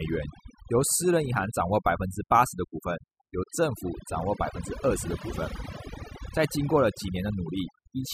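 Speech clip with overdone noise removal from start to finish. The suppressor was pushed so hard it's gating individual frequency bands to nothing, taking soft parts of the voice along with the noise. That leaves sparkly, chirping residue in the gaps.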